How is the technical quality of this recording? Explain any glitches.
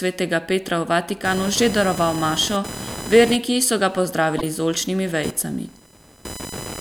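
The recording has two technical faults: a persistent interference noise and a brief decoding glitch.

From 1.25 s to the end of the clip there is computer activity noise, a buzzing whine pulsing at around 1 kHz, roughly 15 dB below the speech. Shifting processor or peripheral load disturbs the shared ground of the audio circuit, so the buzz tracks the computer's activity rather than the speech.

At 4.38 to 4.44 s a corrupt frame was decoded. Flipped bits in what sounds like a few consecutive compressed frames were played anyway, with misread gains and codes placing energy at wrong frequencies. The result is a short chirping burst lasting about the span of those frames.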